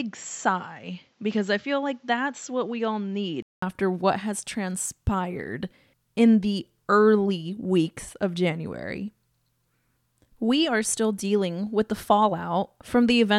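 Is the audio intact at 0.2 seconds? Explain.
No. At 0.2 seconds the speech falls inside a span from 0.0 to 3.62 s where the input was likely switched to a poorer device. Nothing comes through above 7.6 kHz, so the sound is dull and boxy. The level sits about 5 dB lower, with a faint new noise floor well below the speech. A gap of about 200 ms marks the switch back, just before "what has transpired in".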